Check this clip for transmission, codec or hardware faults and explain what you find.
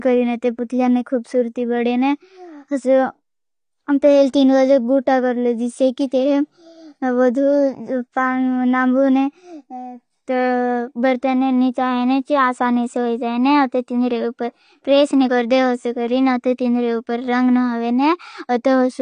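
AAC compression damage runs through the whole speech clip. Nothing is present above 9.7 kHz. The cause is likely AAC-LC at a low bitrate, around 32 kbps. It drops or crudely fills bands it cannot afford. The speech sounds plainly dull and smeared, with fizzy, warbling sibilants.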